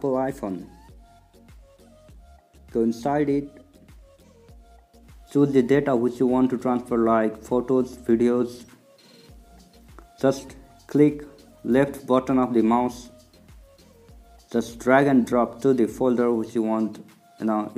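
Nothing goes wrong anywhere in this recording; there isn't a single fault to point to at any moment.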